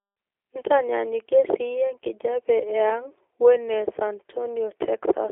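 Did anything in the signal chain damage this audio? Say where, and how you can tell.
Yes. It's the codec stage, and it's there for the whole clip: classic G.729 damage. Everything sits between 200 Hz and 3.4 kHz, with nothing above. The speech has that rough, buzzy, synthetic edge you get when a low-rate coder rebuilds it from a filter, pitch predictor and a few pulses per frame. That fits an 8 kbit/s VoIP link.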